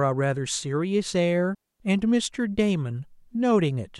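At 1.55 s the speech drops into a clean hole of near silence that lasts about a quarter of a second, ending at 1.80 s. The sound fades out almost instantly and returns just as abruptly, with no crackle or noise burst on either side. This is a digital wireless dropout: the radio link lost too much data, so the receiver muted its output with a very short fade rather than passing on corrupted audio.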